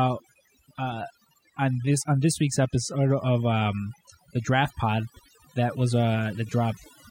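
Overdone noise removal runs through the whole recording, from start to finish. A noise reduction stage set too aggressively pulls individual frequency bands down whenever they sit close to its noise estimate, taking quieter speech detail with them. Pauses fall to near silence flecked with twinkling specks.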